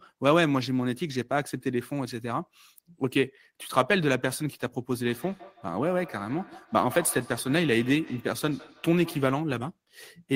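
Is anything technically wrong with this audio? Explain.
Yes. From 4.99 to 9.37 s there is feedback echo between two devices: a second device replays this microphone's signal, which is picked up again, repeating roughly every 150 ms, peaking about 18 dB below the speech.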